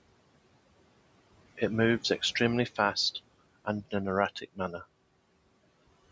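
Right from the start you can hear noise suppressor artifacts. The suppressor is pulling the room noise down by about 21 dB, frame by frame, so the background drops away in the gaps and swells back under the talking.

Between 4.4 and 4.85 s there's a short stretch of speech cut by the noise suppressor. It mistook some of the quieter speech for noise and dipped it by as much as about 21 dB, around a fifth of a second in total, so those bits sound swallowed and faint. The room noise itself sits about 17 dB below the speech, and the call microphone processing leaves nothing above 8 kHz.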